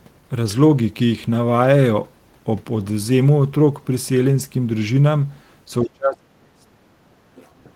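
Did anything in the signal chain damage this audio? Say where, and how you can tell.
Yes. From 5.83 s to 7.48 s the speech repeatedly sinks, in places by roughly 35 dB, so that about a second and a half of it is pulled down or broken into pieces rather than faded evenly. This is speech suppressed in double talk, at the call-processing stage. The likely cause is an echo canceller that heard both parties at once, could not separate the local talker from loudspeaker echo, and attenuated everything it picked up.

At 7.45 s to 7.5 s, overlapping the end of that suppressed stretch, a brief, very faint second voice slips through, sitting about 40 dB below the main speech. This is the other side's voice leaking through, also in call processing. The likely cause is far-end audio played from the device's loudspeaker and picked up by its microphone, with the echo canceller failing to remove all of it during those 50 ms.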